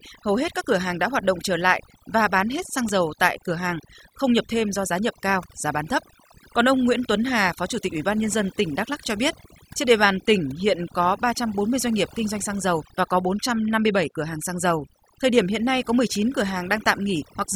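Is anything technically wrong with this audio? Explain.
Yes. Throughout the clip, overdone noise removal damages the speech. A noise reduction stage was set far too aggressively for a noisy recording, so any frequency band sitting close to its estimate of the noise gets pushed down hard or shut off entirely, including the softer parts of the voice. The result is a background that drops and breaks up into scattered twinkling specks.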